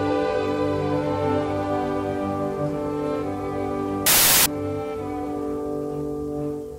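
From 4.06 to 4.46 s, about 0.4 s, the audio turns into loud, harsh broadband noise: samples built from the wrong bytes. Each sample's bytes were assembled out of order or off by one byte, so the rapidly changing low bits landed in the most significant positions and became the bulk of every value.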